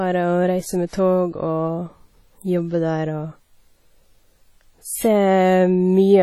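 Heavy coding damage runs through the whole clip, and it is likely WMA compression at a low bitrate, consistent with something around 32 kbps. The encoder works in long transform blocks, so quantisation noise smears over tens of milliseconds around each syllable instead of staying tucked under it. Weaker spectral detail is discarded outright. The speech sounds washy and ringing, with a hiss that swells and fades along with the speech.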